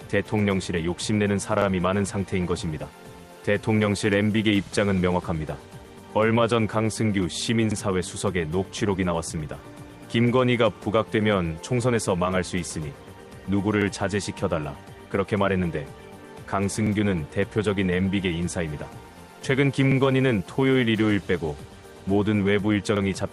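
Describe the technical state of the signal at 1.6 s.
Overlapping chunks occur from 1.62 to 1.67 s: a 3-second chunk begins before the previous one has finished, so 50 ms of sound plays twice and is heard as a short stutter or click. Unlike a dropout, nothing is lost here; the audio repeats.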